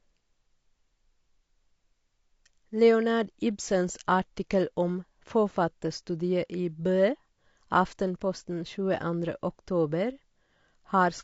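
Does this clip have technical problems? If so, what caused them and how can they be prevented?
Yes. Throughout, the speech sounds rough and grainy, likely from low-delay AAC compression. Too few bits leave noise between pitch harmonics, which fits a bitrate around 32 kbps. On a spectrogram, noise fills the gaps between harmonic lines and the top band looks thin and patchy. Using a higher bitrate or a longer-frame codec when low delay isn't needed would prevent it.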